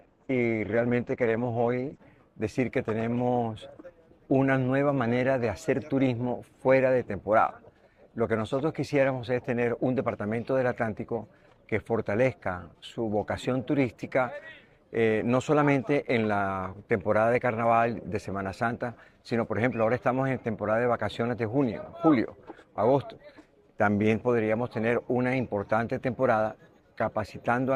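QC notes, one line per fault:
0.0–2.0 s, adaptive stream starting at a low bitrate: the player opened on a low-bitrate rendition before measuring the connection, so treble is missing or synthetic and codec artefacts are stronger. At 2.0 s quality jumps without a gap, fitting a step from roughly 12 to 64 kbit/s Opus.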